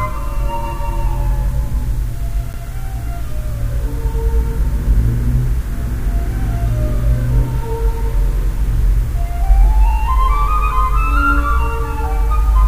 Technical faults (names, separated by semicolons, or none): block of digital silence